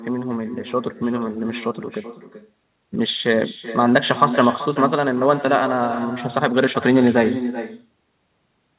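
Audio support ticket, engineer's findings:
Echo with no canceller, throughout. Every phrase returns as a fainter, thinner copy, about 12 dB down. Delay roughly 0.4 s. Probable component: far-end loudspeaker feeding its own microphone, with no echo cancellation. The signal round-trips the network and comes back. Band-limited to 4 kHz, consistent with G.711 A-law on the call path, so the echo is equally narrow.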